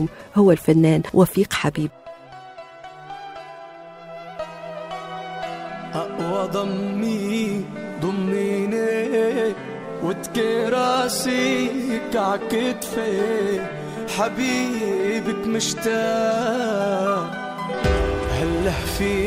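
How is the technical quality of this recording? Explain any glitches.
One glitch stands out. From 10.82 to 14.82 s the sound picks up more smeared, swirly artefacts, then snaps back without any gap. This is an adaptive stream at a lower bitrate: a slowed connection made the player switch for four seconds to a leaner encoding, consistent with Opus dropping from 64 to 32 kbit/s.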